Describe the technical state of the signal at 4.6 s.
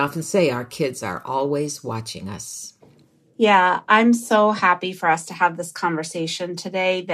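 At 4.6 s the speech signal is intact, with no audible fault at that point.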